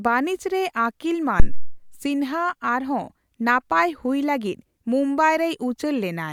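A supply voltage was switched on a live microphone input partway through this speech recording, and the sudden step travelled through the input's coupling capacitors. The result is a phantom power thump, a deep low-frequency thud from 1.40 to 1.85 s that peaks at about -1 dBFS, just short of full scale, and dies away with a decay of roughly 103 ms as the capacitors settle back toward their resting charge.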